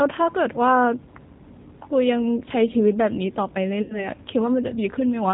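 From start to finish, the speech carries plainly audible G.729 codec damage. At 8 kbit/s, nothing above 4 kHz survives, and the voice sounds rough and synthetic.

From 3.82 to 4.06 s comes VoIP packet loss concealed by the speech codec. About 80 ms is missing, which fits four lost packets. The decoder stretches the last sound into a fading buzzy tone or coloured noise, and the speech stays weak until 4.06 s.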